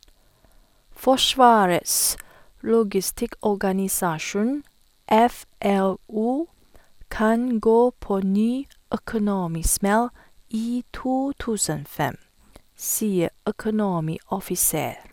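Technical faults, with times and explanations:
No technical faults are audible in this speech.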